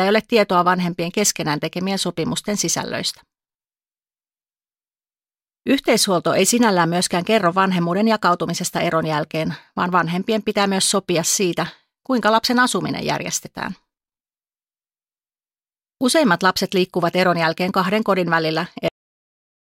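At 18.88 s the final stretch of audio was never written out or played, a cut-off end, so the speech stops mid-sound instead of finishing. It falls straight into silence with no natural decay, and that silence runs through the last 0.78 s.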